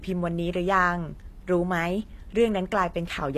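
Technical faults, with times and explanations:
Throughout, HE-AAC compression: the upper spectrum is plainly damaged, and s sounds come out gritty and metallic rather than dull. Unlike a plain low-pass or ordinary lossy coding, the treble is still bright but synthetic, likely rebuilt by spectral band replication that copies lower bands upward under a coarse envelope, so harmonics fail to line up at the crossover, which fits a low bitrate around 24 kbps.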